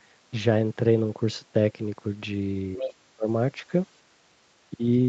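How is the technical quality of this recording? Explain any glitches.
Two related glitches cluster just under three seconds in, both pointing to an echo canceller struggling during a call.

From 2.77 to 2.94 s, a faint second voice bleeds in, about 10 dB below the talker: the other side's voice leaking through, likely loudspeaker echo the canceller missed.

From 2.78 to 3.28 s, the talker's speech dips by up to roughly 30 dB in pieces, speech suppressed in double talk, likely the canceller ducking both voices at once.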